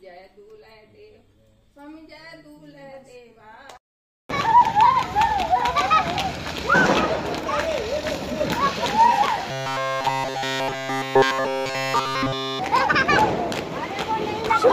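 From 9.51 to 12.59 s, fresh audio likely stopped arriving, so playback kept repeating a short buffer of about 7.5 ms. The result is robotic sound from repeated short buffers: essentially the whole stretch becomes a rigid, metallic buzz at 133 Hz.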